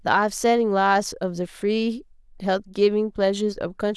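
No audible faults turn up anywhere in this speech recording.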